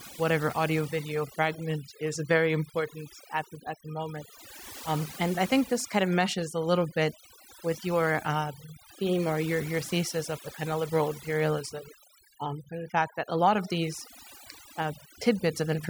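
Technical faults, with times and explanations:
Throughout, overdone noise removal: lowered background broken into twinkling specks, because noise reduction set too strong cuts quiet speech bands along with noise.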